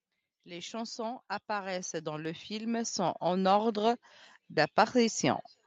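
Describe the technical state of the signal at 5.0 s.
At 5.0 s the speech is intact, with no fault at that moment, and only the ordinary call bandwidth that leaves nothing above 8 kHz.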